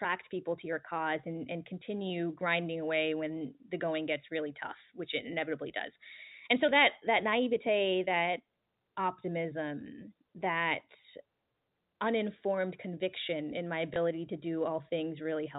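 A speech recording, carried over what sounds like G.711 A-law telephone coding at 64 kbps. From 2.01 to 7.05 s, pre-emphasis was left on: the treble tilts upward along a 75 µs curve, about 13 dB stronger at 10 kHz than at 1 kHz. That steady, sibilant brightness sets it apart from a narrow EQ peak. At 13.94 to 13.96 s, packet loss with the last packet repeated replays one 20 ms packet. It leaves a small blip rather than the silent gap a plain dropout would cause.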